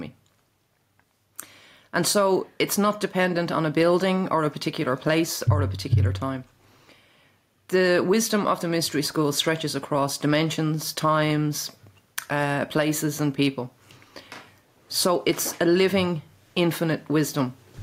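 Gain pumping runs through the whole clip. The gain rises in the gaps and then drops back each time a loud sound arrives, a swing of around 5 dB, so the level audibly breathes in and out. Loud and quiet passages sit closer together than they should, and the sound comes across squashed. The likely cause is input gain set far too high for the microphone, with a fast limiter or compressor clamping down on each peak.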